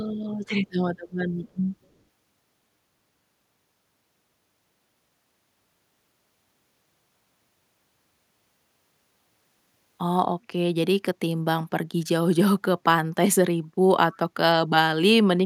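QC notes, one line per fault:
14.12–14.17 s, echo leak: a faint scrap of the speech returns 242 ms late, about 30 dB down, likely from a far-end echo canceller letting loudspeaker pickup through.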